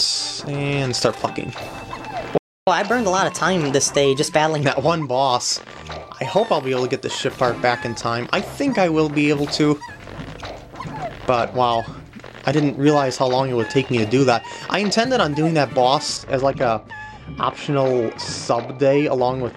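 At 2.38 s the sound cuts to silence for about 0.29 s until 2.67 s, a playback stall, likely from the player's buffer running dry or its thread being blocked. From 2.67 to 4.62 s playback runs at 1.15 times normal speed, raising pitch by roughly two semitones; this catch-up at higher speed resamples the backlog to recover the lost time. From 16.17 s to the end, de-emphasis applied wrongly cuts the treble along a smooth downward slope, about 13 dB lower at 10 kHz than at 1 kHz, leaving the sound dull and muffled.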